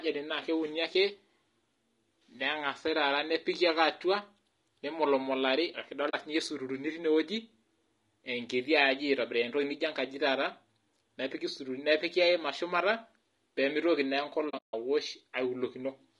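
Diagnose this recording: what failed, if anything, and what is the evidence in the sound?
The speech sounds rough and grainy all the way through, with noise filling the gaps between harmonics and a thin, synthetic-sounding top band. That's the codec stage, likely low-delay AAC compression (AAC-ELD), whose short frames smear pitch detail at a low bitrate, here around 32 kbps.

There's AAC frame loss with muting on the network side too. At 6.09 s a 40 ms soft-edged hole opens just before "siinye sururu ni tine", which fits two lost frames. From 14.49 to 14.74 s there are scattered dropouts, the longest run roughly 150 ms. Overlapping windows fade each gap smoothly.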